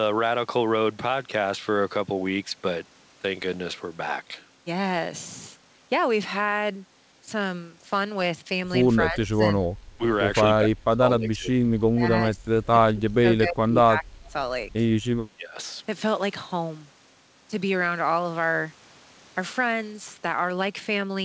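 An echo canceller likely confused the talker with loudspeaker echo during double talk, so the speech is suppressed in double talk at 9.07–9.42, 9.97–10.03, 10.47–11.71, 11.92–14.34 and 15.27–15.57 s, dipping by about 20 to 30 dB or cutting out in pieces.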